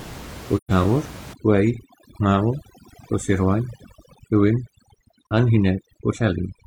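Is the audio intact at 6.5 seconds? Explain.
No. From 1.33 s to the end, overdone noise removal is at work: an over-aggressive noise reduction cuts frequency bands deeply wherever they resemble its noise estimate, catching quiet speech detail too. The room noise, about 18 dB below the speech, drops and breaks up into twinkling specks.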